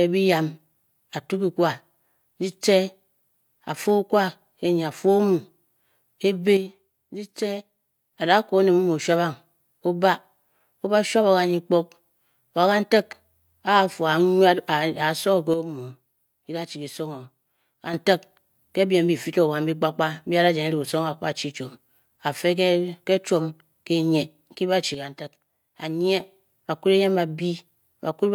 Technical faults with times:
6.57-8.13 one channel drops out
15.54-17.94 one channel drops out
24.94-26.20 one channel drops out

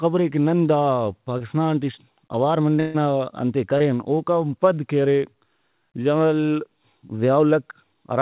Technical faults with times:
1.38-1.42 short concealed packet loss
2.80-2.96 burst of packet loss
3.78-3.82 short concealed packet loss

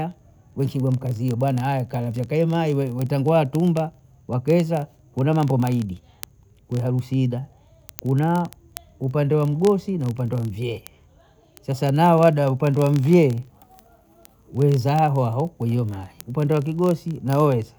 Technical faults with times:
0.11-17.79 word clock ticks

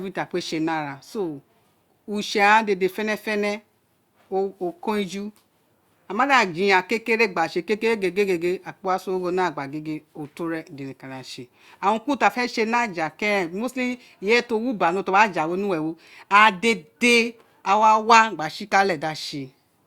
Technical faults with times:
none

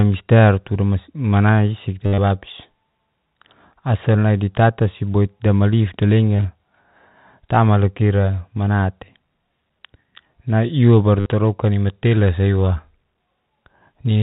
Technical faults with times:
2.06-2.18 packet loss with last packet repeated
6.37-6.45 packet loss with last packet repeated
11.20-11.26 packet loss with last packet repeated

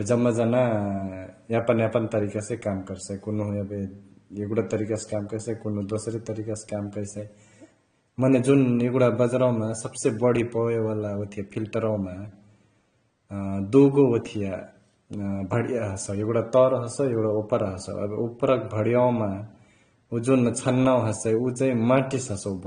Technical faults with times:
0.00-22.66 AAC compression

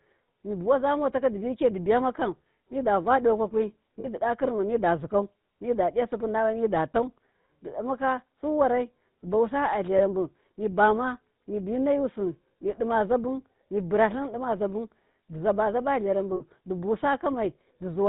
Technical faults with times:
0.00-18.09 GSM full-rate codec
4.00-4.08 lost GSM frames
9.98-10.01 lost GSM frames
16.36-16.46 lost GSM frames

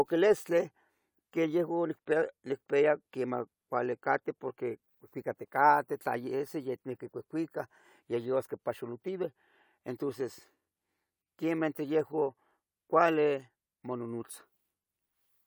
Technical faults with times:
none

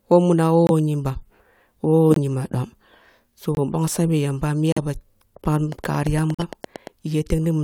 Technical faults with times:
0.67-0.71 corrupt frame muted
2.11-2.18 corrupt frame muted
3.55-3.59 corrupt frame muted
4.72-4.78 corrupt frame muted
5.72-6.88 train of clicks
6.34-6.42 corrupt frame muted

